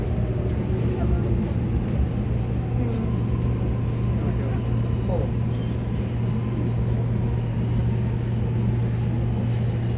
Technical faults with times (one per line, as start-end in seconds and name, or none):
none